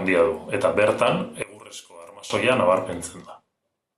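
One channel inverted, from 1.43 to 2.30 s, right after "handia du eta bertan": the speech suddenly drops by about 22 dB to a faint copy, with the centred voice and low end nearly gone before the level returns. The likely cause is one stereo channel with reversed polarity, so when left and right are summed to mono, everything common to both cancels and only the small difference between the channels remains audible.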